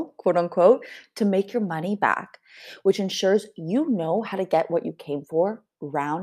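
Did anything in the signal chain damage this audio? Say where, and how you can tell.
Yes. Clock slip clicks run through the speech from 0.14 s to 6.15 s. They are faint, evenly spaced ticks about every tenth of a second, around fifty in all. The steady spacing points to the converter stage, likely two devices running on separate, unsynchronised clocks. Their drift builds up to a whole sample at a fixed rate, so one sample is dropped or repeated at each tick. That rate fits a clock mismatch of roughly 200 ppm.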